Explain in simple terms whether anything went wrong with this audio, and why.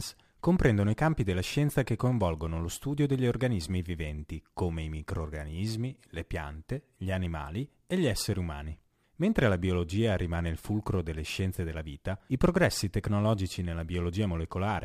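Something did go wrong, and it lasts the whole recording. The speech carries a gritty fizz that rides on the louder and brighter sounds. This is crude rate conversion. The audio was squeezed to a slightly lower sample rate by simply skipping samples instead of smoothing properly. The skipping repeats in a fixed pattern, which points to a 48 kHz to 44.1 kHz change. That pattern creates stray tones unrelated to the voice.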